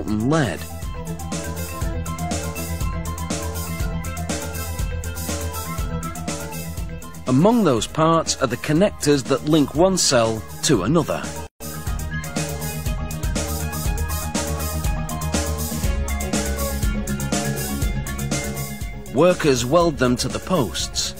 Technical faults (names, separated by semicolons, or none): gap at a join of encoded pieces